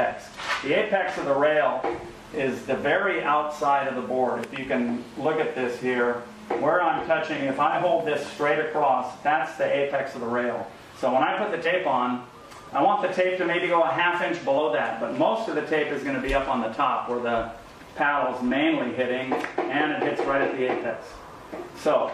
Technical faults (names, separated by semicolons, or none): damaged data in a compressed stream